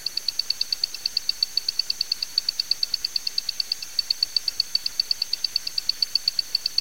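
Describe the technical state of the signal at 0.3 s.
At 0.3 s it's low bit depth without dither, present throughout: grainy distortion that tracks the sound, likely from rounding to around 6 bits, leaving grit only modestly below the signal.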